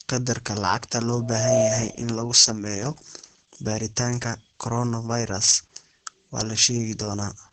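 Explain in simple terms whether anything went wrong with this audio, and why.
The speech sounds muffled, slightly hoarse and a little robotic from start to finish. That is heavy Opus voice compression: to save data, the coder kept only sound below about 8.7 kHz and rebuilt the voice's texture coarsely, losing crispness and natural grain.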